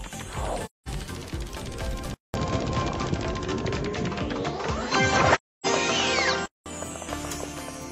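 At 0.65 s an AAC frame loss with muting leaves a soft-edged hole of about 0.21 s, which fits five lost frames that the decoder zeroed. Overlapping windows fade the sound out and back in, so the waveform tapers to flat and the spectrogram shows a blank vertical band with blurred edges.

From 2.14 to 6.66 s the input switched to a poorer device, likely a narrower-band microphone or headset. A 200 ms silence marks the switch. After it the sound turns duller, with nothing above 7.6 kHz, a level shift of a few dB and a new noise floor well below the signal. On a spectrogram the upper region is cut off flat across this stretch.

Inside that stretch, from 5.34 to 5.66 s, a second frame loss mutes about 0.30 s, which fits seven frames. It shows the same tapered gap.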